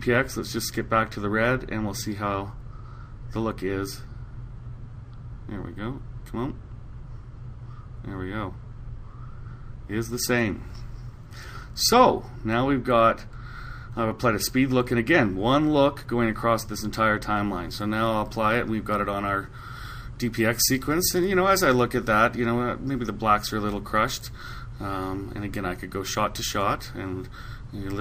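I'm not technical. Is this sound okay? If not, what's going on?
No. From 17.37 s to the end at 28.00 s, a treble boost of the kind used on some CDs was never undone (pre-emphasis left on). That part sounds thinner, brighter and more hissy, with sharp, edgy high sounds.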